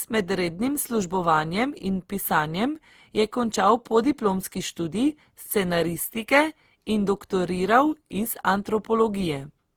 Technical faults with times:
0.00-9.76 generation loss

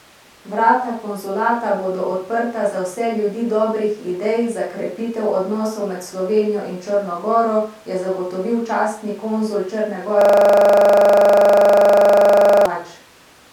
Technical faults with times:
10.21-12.66 system hang loop

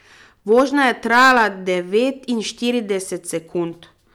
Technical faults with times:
0.52-1.45 hard clipping

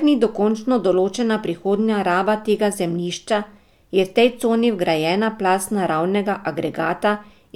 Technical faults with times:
none

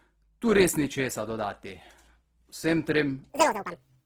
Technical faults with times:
0.00-4.06 Opus compression
3.30-4.06 section at the wrong speed

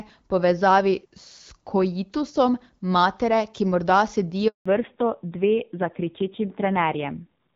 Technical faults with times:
4.48-4.66 handover gap
4.66-7.55 fallback to narrowband

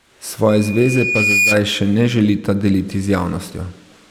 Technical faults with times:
0.48-1.62 loudspeaker feedback squeal

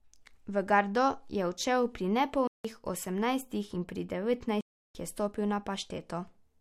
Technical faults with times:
2.47-2.65 block of digital silence
4.61-4.95 block of digital silence

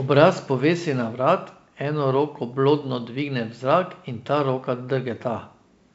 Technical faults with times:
none

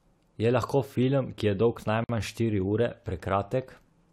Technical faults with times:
2.04-2.09 gap at a join of encoded pieces

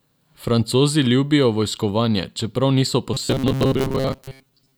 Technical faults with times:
3.14-4.77 robotic sound from repeated short buffers

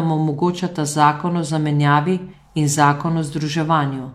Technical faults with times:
2.28-2.33 compressed frames skipped

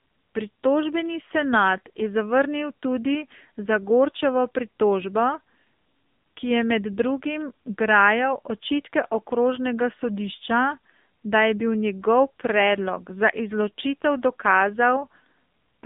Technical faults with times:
0.00-15.85 AMR narrowband mobile codec

